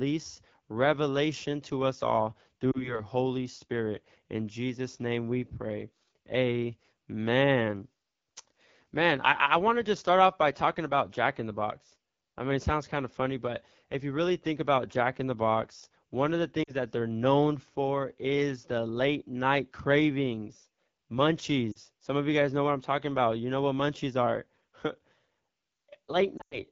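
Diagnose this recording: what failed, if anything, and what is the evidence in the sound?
The whole recording has gone through the AMR wideband (HD Voice) codec at the low end of its range. The speech is rough and raspy from start to finish, which points to one of the two lowest modes, around 8.85 kbit/s. AMR-WB rebuilds speech up to 6.4 kHz from a pulse-excited vocal tract model and fills 6.4 to 7 kHz with shaped noise. At this rate there aren't enough bits to pin down the excitation, so the grain is plainly audible.

There are also lost AMR speech frames on the radio link, at 2.71–3.00 s, 16.63–16.76 s, 21.71–21.79 s and 26.37–26.60 s. The first three sound like brief dips or warbles, about one or two frames' worth each. The last is the worst, a cluster over about 140 ms with one run near 100 ms, where the sound drops to near silence before recovering. The decoder reuses the last good pitch and vocal tract settings at falling gain, and the speech comes back thin for a moment.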